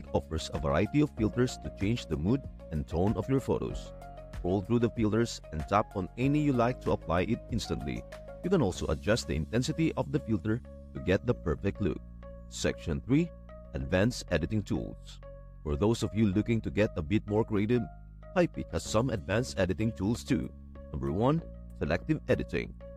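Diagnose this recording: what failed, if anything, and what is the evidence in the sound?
Nothing stood out on listening through this recording that would point to a failure at any stage of the chain.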